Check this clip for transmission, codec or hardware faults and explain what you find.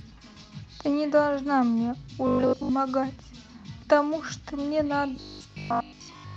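Two stretches of robotic sound from repeated short buffers: 2.27 to 2.71 s, and 5.16 s to the end of the clip. In both, the speech collapses into a rigid, metallic buzz near 50 Hz that loosely tracks the syllables. A 50 Hz buzz points to a 20 ms segment being looped, likely because audio arrived too slowly and playback repeated the last packet while most of the real sound was dropped. The speech passes through an Opus-style call codec with audio extending to about 12 kHz.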